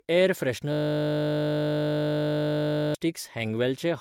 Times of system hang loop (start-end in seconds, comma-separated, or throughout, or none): 0.72-2.95